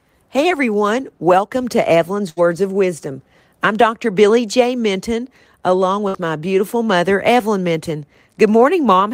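A burst of packet loss hits at 2.29 to 2.41 s and again at 6.08 to 6.17 s. Each time a run of audio, about 60 ms, never arrived in time. The receiver bridged the hole by stretching out the last sound it had, for 71 ms and then 57 ms, letting it fade as a held, dimming tail. The speech then picks up further along, with the stretch in between simply gone.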